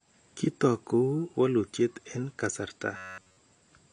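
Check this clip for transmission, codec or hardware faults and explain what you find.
Two faults are audible in the speech.

AAC compression runs throughout. The damage is plainly audible as a dull, smeared texture with fizzy sibilants. The likely cause is AAC-LC coding at a low bitrate, which fits about 32 kbps. The encoder cuts the top band and starves the rest of bits.

Robotic sound from repeated short buffers runs from 2.97 to 3.37 s, right after "walutyet en kasarta". The whole stretch becomes a rigid, metallic buzz at 93.8 Hz. The likely cause is late audio being covered by looping the last buffer, which fits a buffer of about 10.7 ms.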